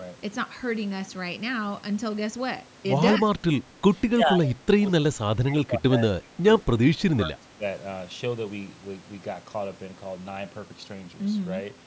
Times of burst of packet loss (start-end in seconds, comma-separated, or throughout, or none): none